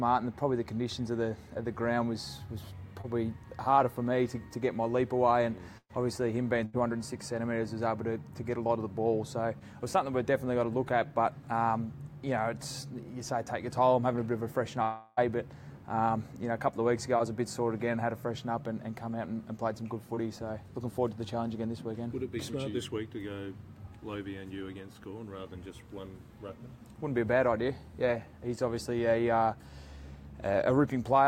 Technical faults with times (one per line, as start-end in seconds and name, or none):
3.01-3.06 short concealed packet loss
5.78-5.91 burst of packet loss
6.65-6.75 burst of packet loss
9.59-9.62 short concealed packet loss
14.82-15.19 long network dropout